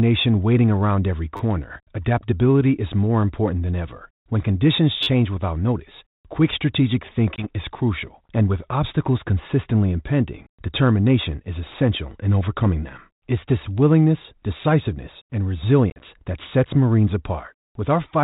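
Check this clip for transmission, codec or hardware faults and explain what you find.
Two kinds of fault are audible: a repeated buffer twice and packet loss on an ADPCM call twice, over a band-limited telephone line consistent with G.726 ADPCM.

The repeated buffer occurs at 1.37–1.40 s, after "waiting around every" and before "adaptability is more important", and again at 5.03–5.07 s, just before "without notice quick strategic". A 10 ms segment replays three and then four extra times because fresh audio arrived late. Each repeat starts with a hard join, so it sounds like a brief buzzy stutter. No audio is lost and no silence is heard, which separates it from packet loss.

Packet loss on the ADPCM call appears at 7.36–7.46 s, between "without notice quick strategic" and "is crucial and with", where 20 ms drops out, about two packets. It appears again at 15.9–16.19 s, where 60 ms is lost in scattered gaps over 100 ms, the longest run lasting 40 ms. 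Each hole is hard-edged silence. After it the speech returns slightly distorted for tens of milliseconds, because the decoder's predictor and step size have drifted.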